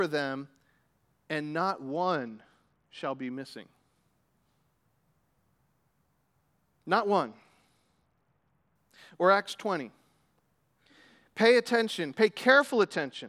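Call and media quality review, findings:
Bluetooth SBC bit pool drop, 1.91–3.32 s, 7.23–8.76 s, 12.50 s to end: treble dulls, gritty noise, no dropouts unlike packet loss. Top sub-bands starved, which fits bit pool 28 to 11, about 90 kbps.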